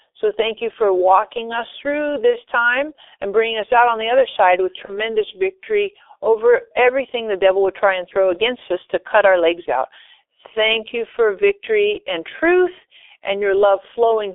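G.723.1 codec damage runs through the whole of this speech recording, 0 to 14 s. Everything sits inside a narrow telephone band of roughly 300 Hz to 3.5 kHz, so the voice sounds muffled and hoarse, and consonants smear together. The damage is heavy and fits the codec's 6.3 kbit/s mode, where a slowly updated vocal-tract model, refreshed only every 30 ms frame, can't follow rapid changes in the voice. VoIP packet loss concealed by the speech codec occurs at 2.30–2.38 s and again at 4.85–5.00 s. Each gap fits the loss of a single 30 ms frame. The decoder fills the hole by extending its last pitch and filter settings at falling gain, stretching the sound. Because each frame's decoding depends on the one before, the voice stays weakened or distorted after the gap, which is why the second event lingers to about 150 ms.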